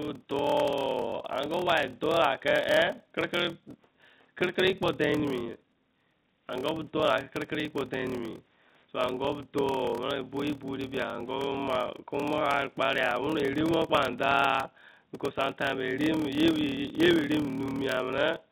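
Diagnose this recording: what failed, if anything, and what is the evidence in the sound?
The fault is a block size mismatch with zero padding, at the driver or buffer stage, and it runs through the whole speech clip. There's a steady buzz at 38.3 Hz, and everything plays at 0.889 times normal speed while the pitch stays about right. That fits 1024-sample blocks being read into slots of roughly 1150 samples, so each one gets a short run of silence tacked on. Those repeating gaps are the buzz. The narrowband call audio, with nothing above 4 kHz, is just the phone codec's normal band limit.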